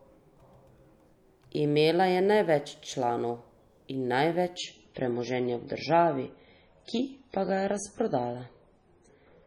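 Speech that abruptly loses its crispness at 4.57 s and stays dulled through to the end, with watery codec artefacts appearing, though the sound never breaks or pauses. This is an adaptive stream at a lower bitrate: the player switched to a leaner encoding mid-stream, with nothing above about 10.5 kHz surviving, which fits a step down from MP3 at 128 kbit/s to MP3 at 24 kbit/s.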